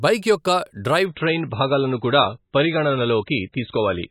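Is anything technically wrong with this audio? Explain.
Yes. From 1.05 s, right after "బైక్ యొక్క", to the end of the clip, the speech drops abruptly to an adaptive stream at a lower bitrate. The player switched to a cheaper encoding of the same stream without any gap, so the cut is seamless but obvious: nothing remains above 4 kHz, sibilants lose their edge, and a watery, swirling codec texture appears. The before-and-after contrast fits a fall from roughly 128 kbit/s MP3 to around 16 kbit/s.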